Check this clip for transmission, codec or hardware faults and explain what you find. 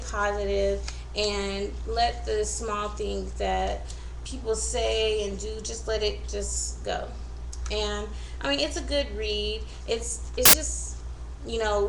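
One fault is present. From 10.45 to 10.53 s, samples are built from the wrong bytes: the reader misassembles each sample's bytes, so the rapidly varying low-order bits land in the high-order position. For those 80 ms the sound is replaced by a burst of loud, harsh broadband noise.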